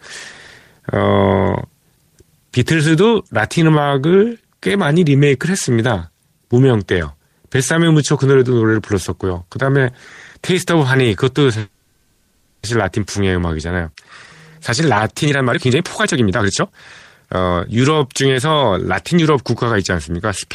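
A call audio freeze runs from 11.59 to 12.64 s: packets were likely held up, so the last sound is stretched into a fading buzz or hiss for about 1.04 s, and the audio then resumes without loss. Jitter buffer speed-up follows at 15.23 to 16.79 s (141% speed, roughly 0.7 s cut) and 17.23 to 20.12 s (114%, roughly 0.4 s), trimming pitch periods so the speech sounds hurried at unchanged pitch.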